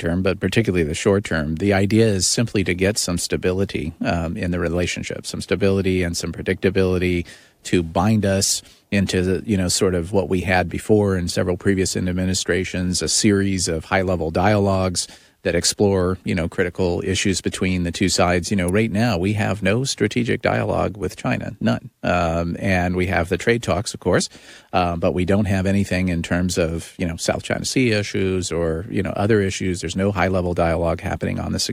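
At 18.69 s, just before "right now we have", a sharp snap, peaking near -10 dBFS, cuts across the speech, likely an electrical switching spike from a nearby switch or motor arcing.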